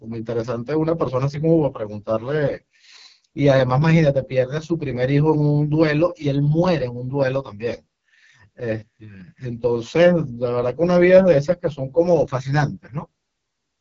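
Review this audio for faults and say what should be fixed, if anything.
AMR wideband (HD Voice) codec damage runs through the whole clip: the speech sounds rough and raspy, and nothing is present above 7.5 kHz. This heavy degradation fits the lowest 6.6 kbit/s mode, where the vocal-tract model starves. Plain band-limiting would sound dull but clean rather than gritty. Encode at 12.65 kbit/s or higher.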